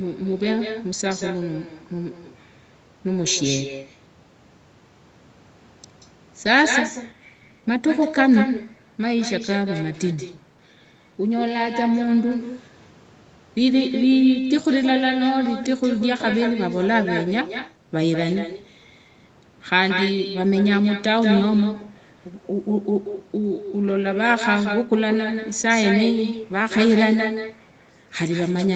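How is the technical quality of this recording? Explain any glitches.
The recording is marred by one persistent fault. Echo with no canceller, throughout: the far end's loudspeaker feeds its microphone, so the speech returns roughly a fifth of a second later as a thinner copy about 8 dB quieter.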